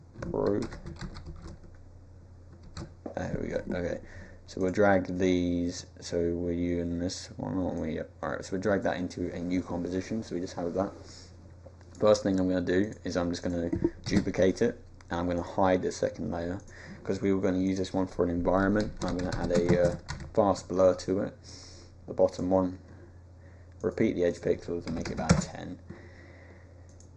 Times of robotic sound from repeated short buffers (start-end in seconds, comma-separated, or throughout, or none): none